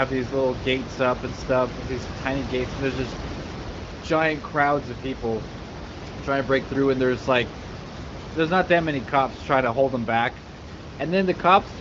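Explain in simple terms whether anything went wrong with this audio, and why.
Nothing went wrong here: the speech comes through a phone-style HD Voice connection that keeps it clear and natural, with only quiet room background noise sitting well underneath it.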